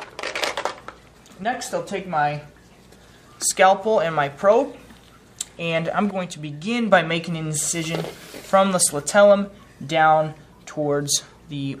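At 1.44 to 1.53 s and 6.11 to 6.92 s, the level drops abruptly by about 6 dB. This is likely one channel dropping out before the mono sum.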